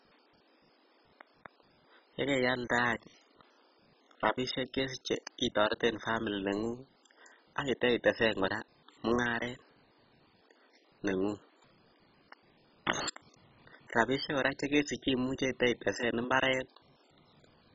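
From start to finish, the speech carries heavy codec damage, most likely MP2 compression at a very low bitrate, which fits something near 16 kbps. Nothing is present above 7.5 kHz, so the sound is dull and muffled. Too few bits reach the coder's sub-bands. Upper bands drop out and flicker, and the bands that remain are coarsely quantised. The result is a gurgling, granular roughness.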